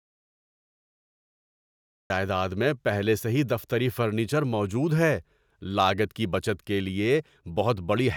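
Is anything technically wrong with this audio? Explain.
Yes. From the start until 2.1 s there is dead silence, no room tone at all, before the speech begins with "میں پہلے سے ہی". This audio dropout to silence likely comes from a lost input while zeros kept being written.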